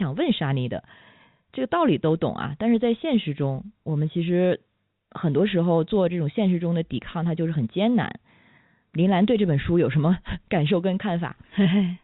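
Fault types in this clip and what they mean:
No faults can be heard in this speech clip. It comes through G.711 mu-law telephone coding at 64 kbps, so nothing above 4 kHz is present, and any coding damage is faint at most.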